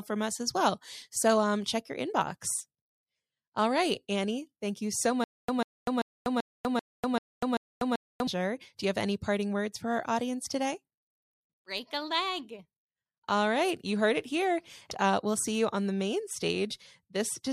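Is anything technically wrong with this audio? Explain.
Yes. From 5.24 to 8.27 s, just after "thank you so", the speech shows stutter with silent gaps: a 143 ms fragment repeats eight times, each followed by 245 ms of digital silence, a steady 388 ms cycle. This is likely a stalled stream replaying its last buffer, and the audio for that span is lost.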